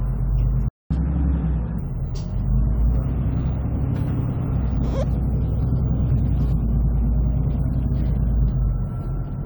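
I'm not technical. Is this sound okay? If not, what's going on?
No. At 0.68 s the sound cuts out completely and stays silent until 0.91 s, a gap of about 0.22 s. This is a playback stall: the player likely ran short of data or was held up for a moment, so nothing came out.

Right after the pause, from 0.91 s to 1.79 s, the sound plays too fast: 1.25 times normal speed, and noticeably higher in pitch, roughly four semitones up. This is catch-up at higher speed: the player is rushing through the backlog to make up the time it lost during the stall. Speed and pitch rise together, only for that short stretch, then snap back to normal. That is what separates it from a simple pitch change.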